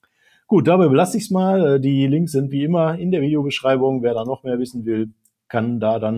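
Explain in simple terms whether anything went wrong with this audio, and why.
A noise suppressor applied to music or sounds runs through the whole clip. A filter built for speech keeps treating steady tones and fading tails as noise, so the level gently pumps.

Sound cut by the noise suppressor happens from 0.03 to 0.5 s and again from 5.05 to 5.27 s. There the filter mistook the sound for noise and pushed it down sharply, so it dips.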